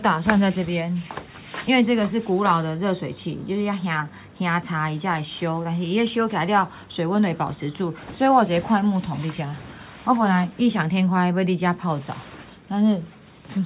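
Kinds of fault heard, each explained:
No faults detected; nothing in the audio calls for correction.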